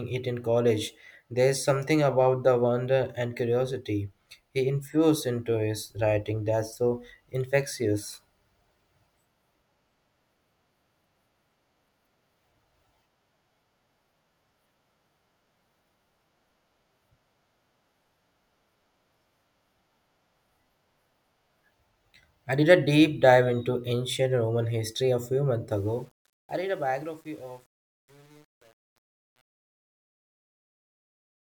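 A speech recording whose closing fade-out, starting around 25.7 s, turns gritty from 25.70 s to the end at 31.55 s, worst from 26.32 s: truncation distortion on a fade, with the undithered level stage quantising the dying signal into coarse steps, consistent with about 9 bits.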